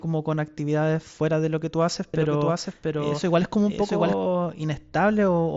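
It's a speech clip with a doubled audio track between 2.14 and 4.14 s: a second full-band copy of the speech runs roughly 0.7 s behind the original, a few dB quieter, with no decay or room colour, and it cuts in and out abruptly at those points. That's likely a second capture through a slower path being mixed back in. The whole thing comes through a Bluetooth mSBC headset link, so nothing sits above about 7.7 kHz.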